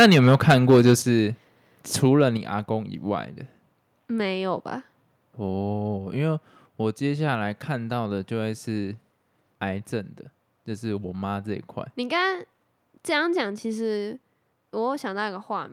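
From the start to 0.94 s the speech has a harsh, crackling edge, with around 7 percent of samples flattened at the converter's limit. This is microphone overload, likely from input gain driving peaks about 10 dB past the converter's limit. A milder burst at 2.07–2.24 s overshoots by about 1 dB and clips only a fraction of a percent of samples.

Sudden drops in level follow at 1.02 s (about 7 dB) and 2.37 s (about 5 dB), each just after a distorted stretch, then a smaller one at 13.41 s (about 2 dB). The speech and the background fall together, which points to the microphone volume being stepped down, likely by the call software reacting to the overload.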